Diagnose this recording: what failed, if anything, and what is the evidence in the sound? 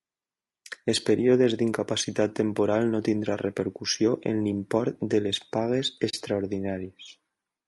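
Throughout the clip the speech sounds rough and grainy, with a hiss-like fill between the harmonics and a top band that sounds thin and somewhat synthetic. The stage is the codec, likely low-delay AAC compression such as the AAC-ELD used in video calls. Its short frames resolve pitch harmonics poorly and spend more bits per second, so at a low rate, which fits about 32 kbps, the encoder substitutes noise for detail it cannot afford.

From 6.09 to 6.14 s the sound fades out and back in, leaving a soft-edged gap of roughly 50 ms. This is AAC frame loss with muting, at the network or transport stage feeding the decoder. The dropout matches about two missing frames of 20 ms each. The decoder zeroed their spectrum, and the overlapping transform windows on either side tapered the audio into and out of the silence.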